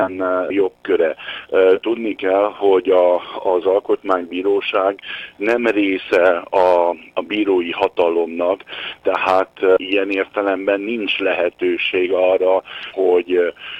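No faults heard: there are no dropouts, discontinuities or distortion at any point in the audio.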